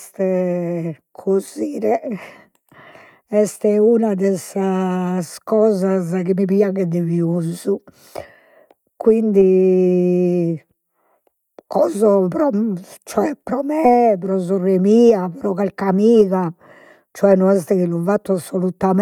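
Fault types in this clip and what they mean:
No audible faults detected.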